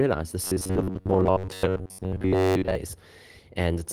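A speech clip in which, from 0.44 to 2.75 s, the voice turns into a rigid, metallic buzz near 94 Hz that only loosely tracks the words, the sound of robotic repeated short buffers. The likely cause is audio arriving too seldom, so most of that stretch is filled by looping roughly 11 ms of sound, which fits that buzz rate.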